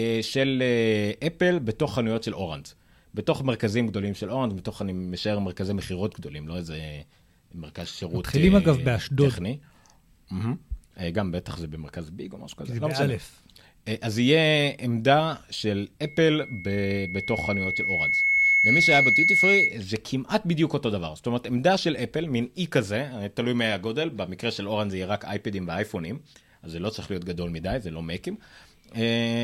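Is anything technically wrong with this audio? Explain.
Yes, loudspeaker feedback squeal from 16.04 to 19.78 s: the mic re-amplifies its own speaker, so a 2.2 kHz tone swells over roughly two seconds to sit above the speech.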